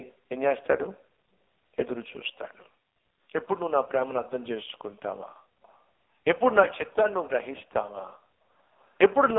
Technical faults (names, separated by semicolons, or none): AMR narrowband mobile codec; echo leak